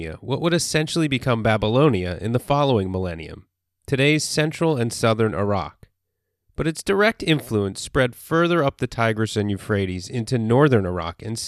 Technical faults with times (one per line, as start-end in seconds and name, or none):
none